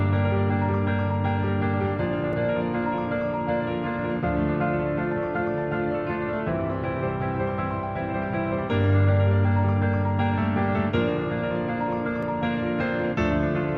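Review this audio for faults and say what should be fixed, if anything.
Two blocks of digital silence, at 2.33 s (2.9 ms, which fits a 128-sample buffer) and 12.23 s (1.45 ms, fitting 64 samples), are heard as sharp ticks where the output dropped to zero mid-stream. The waveform shows a flat line with abrupt edges, and the spectrogram shows thin broadband vertical streaks. Keeping buffers filled on time, for example with larger buffers or higher audio-thread priority, would prevent these dropouts.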